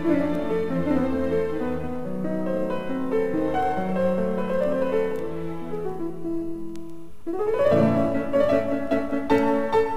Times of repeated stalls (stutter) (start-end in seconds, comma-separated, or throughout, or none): none